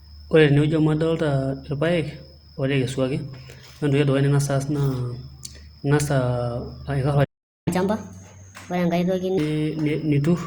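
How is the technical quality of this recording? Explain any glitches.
Two linked playback glitches affect the recording, both near the end of the speech.

From 7.24 to 7.68 s there is a playback stall: the speech halts mid-flow for about 0.42 s, likely because the player ran short of data. On a waveform this appears as a flat gap, and on a spectrogram as an empty vertical band.

From 7.68 to 9.38 s comes catch-up at higher speed: the player works through its backlog at 1.25 times normal rate by resampling, so the speech sounds hurried and roughly four semitones higher. On a spectrogram the harmonics sit visibly higher and closer in time, then drop back.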